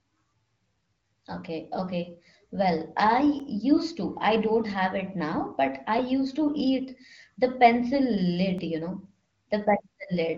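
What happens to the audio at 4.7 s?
A click recurs about every 2.6 s from 0.8 to 8.58 s, ending just before "you know". It is likely clock drift buffer slips: two clocks disagreeing by roughly 300 ppm, so a buffer periodically drops or repeats a block of roughly 30 samples.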